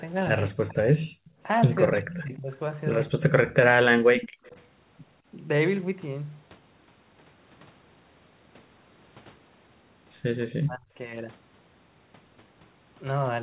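Speech suppressed in double talk occurs at 0.52 to 1.02 s, 1.86 to 2.5 s, 3.09 to 3.53 s and 10.56 to 10.91 s in this speech clip. The voice dips by about 40 dB, or about 30 dB in the second stretch, most likely because an echo canceller mistook it for loudspeaker echo while both sides talked. An echo leak appears at 1.25 to 1.31 s as a faint copy about 35 dB down, and again at 4.14 to 4.51 s, much louder at about 10 dB below the speech. In both cases the voice returns 204 ms late, likely because a loudspeaker side's canceller let part of its microphone pickup through. The background is gated by the echo canceller from 4.29 to 4.43 s, where the room sound drops by about 40 dB and then comes back. The whole clip is band-limited to 4 kHz by its telephone-grade codec.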